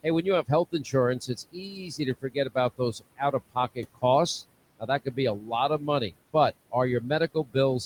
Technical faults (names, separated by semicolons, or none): noise suppressor artifacts; speech cut by the noise suppressor